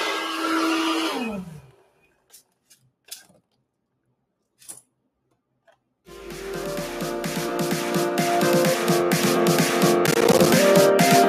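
From the start, a noise suppressor built for speech has been applied to music or sounds. It treats steady tones, ambience and reverb as noise, so the level swings by around 5 dB as attacks pass and sustained material sinks. Unlike a compressor, it reacts to how steady and noise-like the sound is, not to its loudness, which is why held parts and tails thin while onsets stay intact.

Two places show sound cut by the noise suppressor. From 1.37 to 2.53 s, about a second of material is pulled down, by about 19 dB at the deepest point. From 3.05 to 3.53 s, roughly a fifth of a second drops by about 16 dB. These are selective dips on content the suppressor judged to be noise, not a gate closing on everything below a threshold. Level returns as soon as the material reads as wanted sound again.

Between 10.07 and 10.50 s there is processor overload crackle. The processor repeatedly failed to finish its audio buffers in time, and each miss was filled with silence. 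Around fifteen dropouts over that stretch, consistent with buffers of around 10 ms, produce a burst of hard-edged ticks and tearing. This differs from clipping distortion because the damage consists of gaps that start and stop abruptly, not a flattened waveform, and it ends once the load clears.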